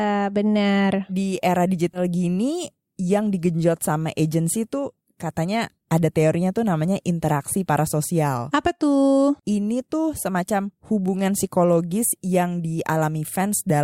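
Compressed frames skipped at about 1.93 to 2.01 s in this speech clip. Roughly 20 ms of audio goes missing, which fits a single dropped frame from a codec using 20 ms frames, either lost from the file or rejected by the decoder as damaged. Playback jumps straight past it.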